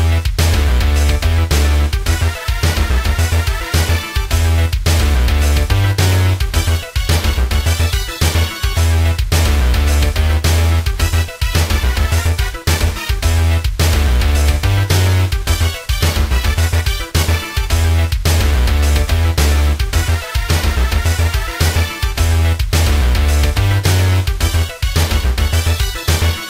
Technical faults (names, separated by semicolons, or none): none